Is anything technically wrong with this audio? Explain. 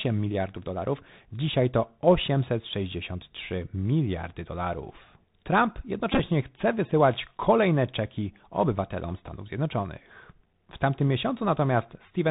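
Yes, two faults are audible.

Throughout the clip, the speech carries Bluetooth CVSD headset codec damage, and it is plainly audible. CVSD encodes one bit per sample at 64 kHz, each bit only stepping the waveform up or down with an adaptive step size, which fits a 64 kbps link. Everything above 4 kHz is gone, so the speech sounds narrow and boxy. Loud high-frequency energy outruns the step size and distorts, s sounds turn scratchy, and a granular hiss sits under the speech.

From 6.12 to 6.20 s, just before "chce wysyłać kolejne czeki", there is a Bluetooth headset packet repeated fault. Headset voice packets were lost, and the chip re-decoded the previous packet's bits in their place. About 45 ms was lost, scattered over roughly 75 ms, which points to around a dozen packets. The longest run lasts about 10 ms, and there the 3.75 ms repetition produces a short buzz near 267 Hz. The isolated repeats register only as small ticks.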